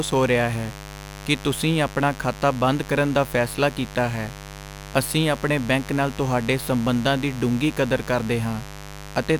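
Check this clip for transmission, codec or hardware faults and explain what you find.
One fault runs the whole clip: mains buzz. Switching spikes on 50 Hz mains add harmonics into the kilohertz range, a raspy buzz about 15 dB below the speech, unlike a smooth low hum.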